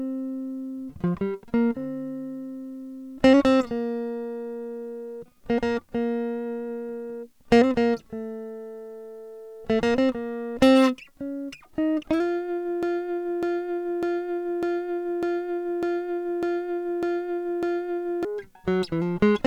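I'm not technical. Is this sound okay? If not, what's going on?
No. From 12.83 to 18.25 seconds the music sticks, repeating the same 0.6-second snippet nine times in a row, a broken-record loop. The player or stream likely stalled and kept replaying its last fragment, so the music meant for that stretch is missing.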